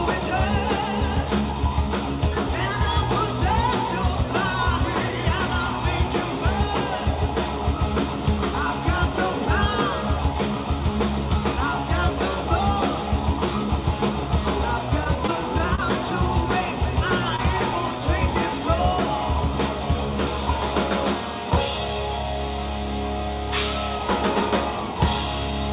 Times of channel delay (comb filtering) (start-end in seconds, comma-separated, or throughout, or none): none